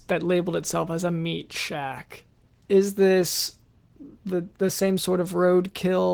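Throughout, Opus voice compression is plainly audible: SILK codes the speech, with CELT covering content above 8 kHz, and the coarse coding points to roughly 16 kbps.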